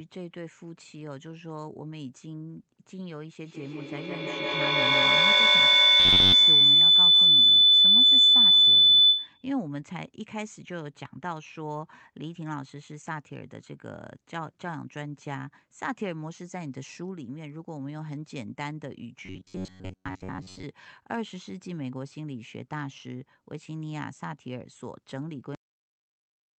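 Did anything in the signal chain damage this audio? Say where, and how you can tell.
Yes. From 3.43 s to 9.56 s a piercing tone rises over the speech, reaching about 17 dB above it, centred near 4 kHz and pulsing around every 150 ms. This is feedback howl, a call-processing and room problem: two devices on the same call share a space, so each device's loudspeaker output re-enters the other's microphone. The loop gained on every pass, narrowing to the band it favours and cycling at its round-trip delay.

Between 6.00 and 6.33 s, and again from 19.26 to 20.64 s, the sound turns into a stiff metallic buzz pinned at 93.8 Hz while still loosely tracking the speech contour. This is robotic sound from repeated short buffers, at the driver or buffer stage. The likely cause is audio arriving too seldom, so the software looped the last fragment and skipped most of the real signal. A 93.8 Hz buzz fits a repeated chunk of roughly 10.7 ms.

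At 25.55 s the speech stops mid-sound and drops straight to digital silence with no natural decay, and nothing follows to the end. This is a cut-off end, a storage or playback fault: the final buffers were never written or played out. The audio is truncated rather than faded. An abrupt edge like this, landing inside a sound instead of after it, points to lost data, not to the speaker pausing.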